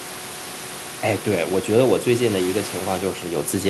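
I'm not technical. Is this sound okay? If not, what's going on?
Yes, this sound is okay: there is just some ordinary background noise from the room, which is part of the recording rather than a fault.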